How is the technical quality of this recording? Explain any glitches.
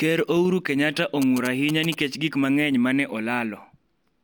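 The recording has one clear fault: GSM signalling bursts from 1.22 s to 1.94 s, under the speech. A nearby 2G handset is sending short groups of radio bursts while signalling with the network, and the audio circuitry rectifies that RF energy into the signal path. The result is a galloping dit-dit-dit of short buzzes at a 217 Hz repetition rate, sitting roughly 10 dB below the speech level.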